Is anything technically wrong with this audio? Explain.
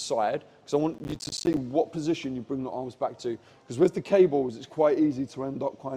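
Yes. From 0.94 s to 1.57 s there is processor overload crackle. The processing could not keep up, so a long run of short buffers, each around 10 ms, missed their deadlines, roughly thirty of them, and every missed buffer was replaced with silence. Each of those hard-edged dropouts chops a small hole in the signal, and in rapid succession they merge into a gritty, tearing crackle over the sound that stops once the load eases.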